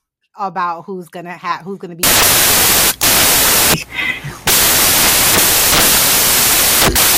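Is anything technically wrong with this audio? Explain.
Yes. From 2.03 s, just after "gonna have who's gonna", to the end, samples are built from the wrong bytes: misassembled low bits dominate, giving loud, harsh broadband noise, close to white on loud sounds.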